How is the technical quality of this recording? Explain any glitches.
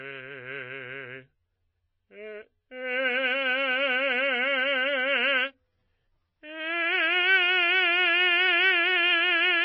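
Quality is poor, with one fault running through the whole music clip. MP3 compression, likely at a starved bitrate near 24 kbps, removes everything above 5.8 kHz and switches weak frequency lines on and off, so the sound is dull, watery and plainly damaged.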